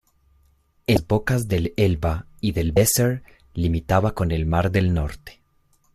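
At 0.94 to 0.97 s and again at 2.74 to 2.77 s, damaged data in the compressed stream breaks decoding. Each event is a brief glitch as the decoder loses sync.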